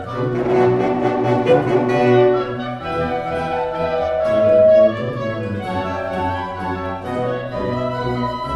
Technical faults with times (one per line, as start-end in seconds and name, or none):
3.25-4.95 loudspeaker feedback squeal